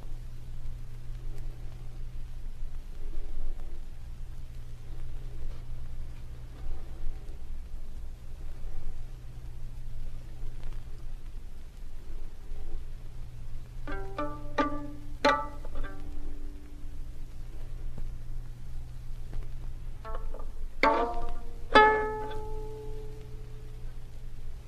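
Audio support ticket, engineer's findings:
Listened all the way through and nothing faulty turned up, so there's nothing to chase on this one.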